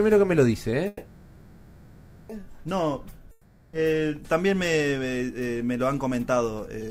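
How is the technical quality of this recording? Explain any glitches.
The recording has two clear interruptions, each with a different effect on the timeline.

From 0.87 to 2.31 s there is a call audio freeze. The last sound is stretched into a fading buzz lasting about 1.4 s, and then the audio resumes exactly where it stopped. The likely cause is delayed packets draining the jitter buffer, so the receiver filled the wait with synthesised sound. Nothing is skipped, but everything afterwards plays about 1.4 s later. That continuity is what sets it apart from a dropout.

From 3.31 to 3.75 s there is a long network dropout. Again the last sound smears into a decaying buzz, this time for about 0.42 s, but when the audio returns it has jumped ahead, and that whole 0.42 s of material is gone. It is shorter than the freeze and does not fade down to silence. The giveaway is the abrupt discontinuity on re-entry: lost packets were likely concealed and then dropped rather than played late.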